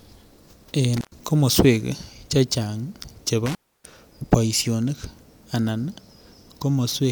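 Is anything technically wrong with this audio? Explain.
Yes. At 0.97 to 1.16 s, just before "komoswek chechang", and at 3.46 to 3.93 s, before "boisionik anan", the speech drops out with crackle on both edges for about 109 ms and then 292 ms. This is intermittent contact: a loose plug or cable briefly breaks the signal path.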